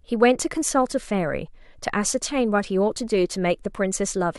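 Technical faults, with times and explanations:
No technical faults are audible in this speech recording.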